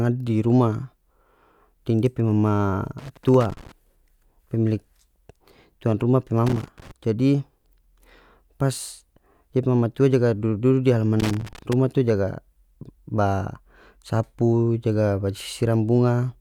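At 2.98 s the speech breaks into loose connector crackle, lasting until 3.72 s. It returns from 6.46 to 6.91 s and again from 11.20 to 11.73 s. Each burst is an irregular scratching crackle. A worn or dirty contact in the signal path is making and losing connection as it shifts. The audio is chopped on and off many times within each burst. Any DC present on the line turns those breaks into small pops.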